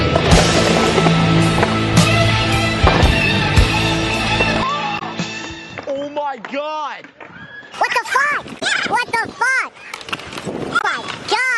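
From 4.63 to 7.74 s the input was likely switched to a poorer device: the sound goes dull and boxy with nothing above 7.6 kHz, drops by about 10 dB, picks up a faint new noise floor, and returns to full clarity with no gap at either switch. Damaged data in the compressed stream makes the decoder misread frames and resynchronise, producing brief glitches at 4.95–5.02 s (inside the duller stretch), 8.58–8.63 s and 10.78–10.85 s.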